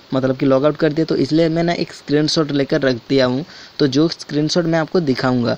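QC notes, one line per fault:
Nothing stood out on listening, and there is nothing to log for this clip.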